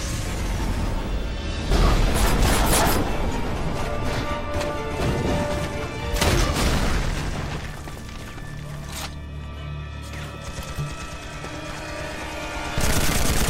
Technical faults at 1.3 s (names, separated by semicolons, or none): none